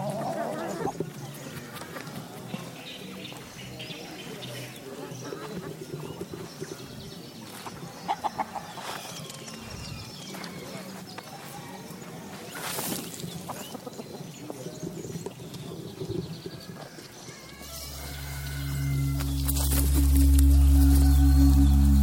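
From 17.62 s to the end at 22.03 s, pre-emphasis is left on. The treble boost of a 50 µs FM curve was never undone by the matching de-emphasis. Highs sit about 10 dB above 1 kHz at 10 kHz. The sound turns thin, bright and hissy.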